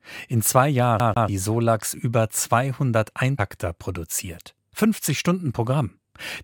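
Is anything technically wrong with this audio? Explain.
Yes. From about 1.0 s to 1.28 s the speech shows a CD stuck on one turn: a scratch sends the laser back one track at the same point each revolution, so a 144 ms segment repeats twice, with a short mute at each jump, a quick, even stutter.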